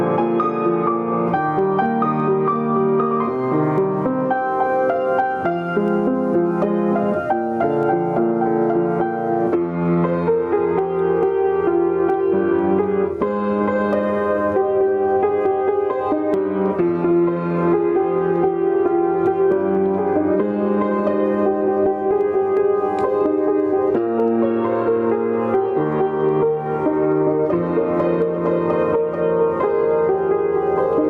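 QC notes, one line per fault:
Throughout, gain pumping: the level rises and falls by around 10 dB, clamping down on each loud sound and recovering afterwards, so loud and soft passages sit closer together and the audio sounds squashed. Likely cause: input gain set far too high, with a fast limiter or compressor reacting.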